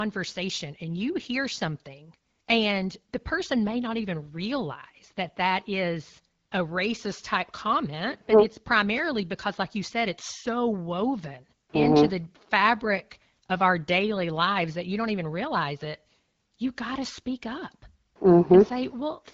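No technical fault is audible in the speech, which carries the band-limited, lightly coded sound of AMR wideband (HD Voice) coding consistent with a 12.65 kbit/s rate.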